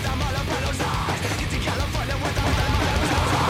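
From 2.37 s to the end, the audio is doubled. A second full-band copy runs about a fifth of a second behind the first, at roughly the same level. It has no decay and no room colour. It simply repeats everything, so each sound is heard twice, out of step. The copy starts abruptly at 2.37 s. The likely cause is the same signal being mixed in twice. A slower second capture path or an edit that left two offset copies would do this.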